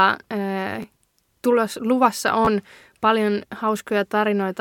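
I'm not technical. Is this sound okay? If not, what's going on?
No. There are two repeated buffers, one at 0.82 s and one from 2.45 to 2.47 s. The playback device ran short of fresh speech, so it replayed the last tiny chunk of about 12 milliseconds. At 0.82 s the chunk plays one extra time, and at 2.45 s it plays twice more. Each repeat is a hard join, heard as a brief click or buzz, and roughly 10 and 20 milliseconds of real audio are lost.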